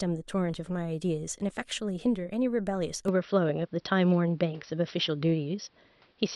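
At 3.08 s the input likely switched to a poorer device, and it stays there to the end. Nothing above 5.8 kHz passes afterwards, so the speech turns dull, the level shifts modestly, and a faint new noise floor appears, with no gap at the switch.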